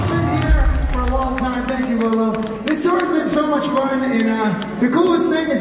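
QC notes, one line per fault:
No faults found in this clip. Nothing needs flagging.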